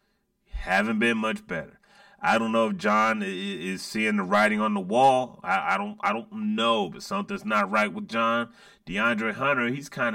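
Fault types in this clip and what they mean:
Channel delay (comb filtering), throughout: one channel reaches the mix about 5 ms after the other, and when the two are summed to mono the shared speech cancels wherever the offset puts them half a cycle apart. That leaves a fixed row of notches, the first near 100 Hz and the rest at regular steps roughly 200 Hz apart, so the speech sounds hollow and phasey, as if heard through a tube, for the whole clip.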